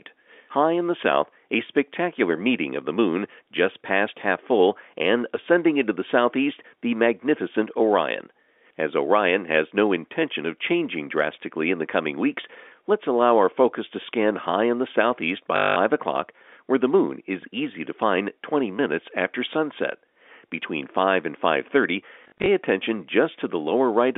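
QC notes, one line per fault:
15.56–15.76 s, packet loss with last packet repeated: a 200 ms gap where the receiver kept replaying the last packet it had. The result is a robotic stutter with a steady buzz near 50 Hz, which fits 20 ms packets. Each replayed slice joins the next out of step with the pitch. Unlike a dropout, the gap is filled with repeated sound rather than silence.
17.43–17.62 s, phantom power thump: a supply stepped on the live input and passed through the coupling capacitors. It is heard as a single deep, low-frequency thud that dies away in about 43 ms. There is no repeated texture or buzz, which separates it from the packet stutters, and it is far lower and rounder than a click or a plosive.
22.24–22.48 s, packet loss with last packet repeated: scattered losses totalling 140 ms across 240 ms, with no single run longer than 40 ms. This gives short bursts of repetition, broken up by brief stretches of intact sound within the telephone-band audio. 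It is choppier than the solid buzz at 15.56 s, but it has the same replayed-packet character rather than silent holes.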